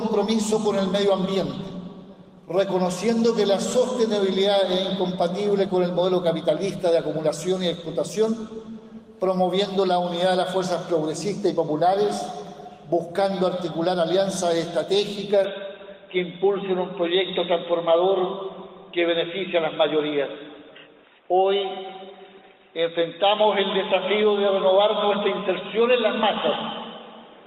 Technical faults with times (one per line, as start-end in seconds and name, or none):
15.44-27.46 input switched to a poorer device